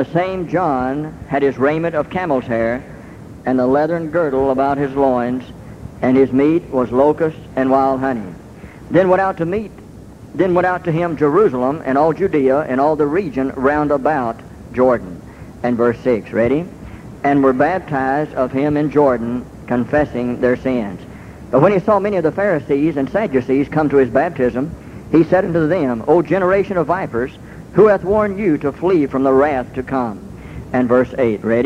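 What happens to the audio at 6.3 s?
Nothing goes wrong at 6.3 s; the audio carries straight through that point with no dropout, click, glitch or other audible fault.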